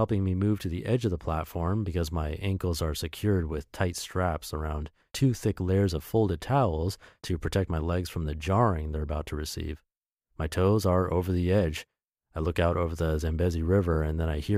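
No technical faults can be heard anywhere in the recording. The speech runs without dropouts, clicks, distortion or level jumps.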